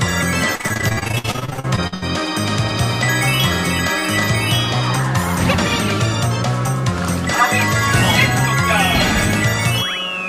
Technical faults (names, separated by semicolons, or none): repeated packet loss (robotic sound)